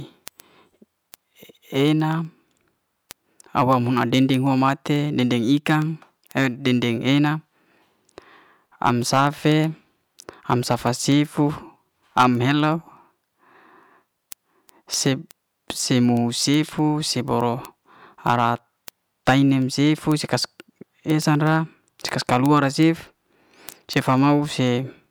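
From 0.15 s to 25.04 s, sharp ticks of uneven strength run through the speech, roughly every 0.15 s. These are word clock ticks: the receiver's unlocked clock drifts about two hundred ppm from the sender's, so each slip drops or repeats one sample.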